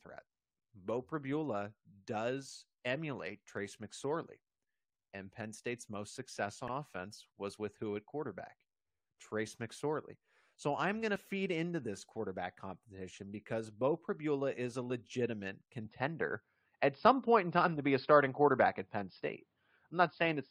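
A speech recording with brief blips at 6.68 s, 11.16 s and 14.90 s. These come from damaged data in a compressed stream: corrupted frames throw the decoder off, and it jumps ahead to the next frame header. From 15.85 s to the end, the speech turns dull and boxy, with nothing above 5.1 kHz, a level shift of a few decibels and a faint new noise floor. There is no silence at the change. The likely cause is the input switching to a poorer device. What separates this from a low-pass filter is that the tone, level and background all change together, at one instant.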